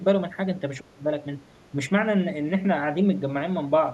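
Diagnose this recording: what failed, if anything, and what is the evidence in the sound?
Call processing failed: from 0.79 to 1.11 s the speech sinks by roughly 25 dB, likely speech suppressed in double talk, with the echo canceller turning down the talker along with the far-end echo. On a spectrogram the band thins to a dark gap; the waveform envelope collapses.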